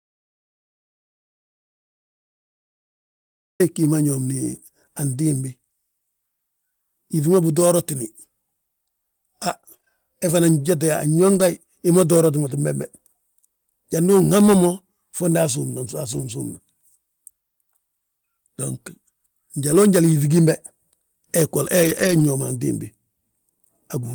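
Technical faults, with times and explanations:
0.00–3.60 s: audio dropout to silence. The clip opens already in a dead gap of silence, with no room tone at all. The input was likely lost, so the recorder kept writing silence. Speech only begins at 3.60 s.
9.49–11.41 s: scattered short gaps. About five tiny holes, the longest around 20 ms and about 100 ms in all, are spread across this stretch. Each was patched by stretching the preceding sound, so the speech stays clear but has brief ticks and smears.
16.13–16.27, 19.71–19.73 and 21.83–22.21 s: lost packet rebuilt from error correction. There are no gaps here. Instead, short spans of speech turn rougher and noisier, because they were played from low-bitrate backup copies. The first span lasts about 80 ms, which fits four lost packets. The second is a single 20 ms frame just before "njal yíŧi gimbe". The longest lasts about 200 ms, roughly ten packets, and ends just before "ñoom antimbi".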